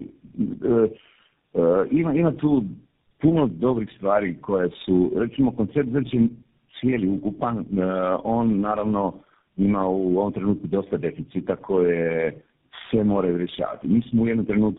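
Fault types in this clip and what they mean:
tandem speech coding: The speech was decoded and re-encoded at several network borders, each coder working on the previous one's degraded output. The sound points to a chain of roughly four speech codecs ending in GSM full rate. The errors stack up, so the speech sounds rough, muffled and warbly throughout, beyond what a single coder would cause, and nothing remains above about 3.7 kHz.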